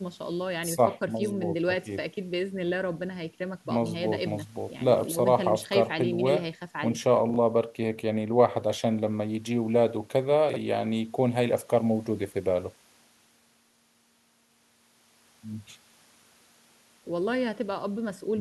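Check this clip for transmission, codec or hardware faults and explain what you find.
Two short spots of chunks out of order in this speech, at 7.30 to 7.36 s and again at 10.50 to 10.56 s. In each, a 21.33 ms chunk of audio turns up two chunks late and plays after the ones meant to follow it. Nothing goes missing, but the order within that 64 ms window is scrambled and there are three hard joins, so you hear a brief jumbled stutter each time.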